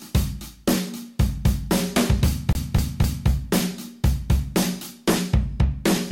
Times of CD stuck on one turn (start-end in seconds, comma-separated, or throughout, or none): 2.53-3.29